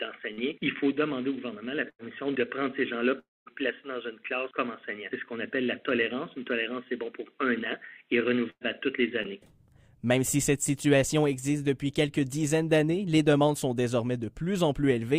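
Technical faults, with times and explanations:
0.33 to 0.39 s and 9.23 to 9.26 s, short concealed packet loss: About 40 ms and then 20 ms of audio never arrived. The receiver continued the preceding sound to cover each gap, then blended back. Each is heard as a brief smear or wobble.
1.89 to 2.01 s and 8.50 to 8.63 s, burst of packet loss: Several packets in a row were lost, about 100 ms and then 120 ms. The receiver extended the last sound and faded it. The second fade reaches about 60 ms of silence. Playback then resumes later, skipping the lost part.
3.19 to 3.48 s, long network dropout: About 280 ms of audio is gone. A stretched continuation of the last sound fades out, leaving about 220 ms of silence. The audio then returns further on. The likely cause is that nothing reached the receiver for that stretch.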